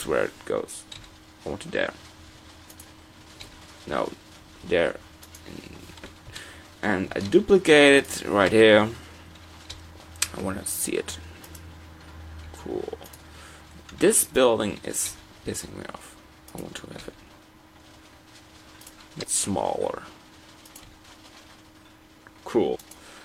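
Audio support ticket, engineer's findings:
Compressed frames skipped: whole frames dropped before playback, either missing from the stream or rejected by the decoder as corrupt. The audio jumps forward by the length of the dropped frames. Events at 1.72–1.88 s (roughly 50 ms lost), 19.18–19.25 s (about 150 ms), 20.11–20.17 s (about 100 ms) and 22.71–22.76 s (about 100 ms). Check file integrity and the decoder's error handling.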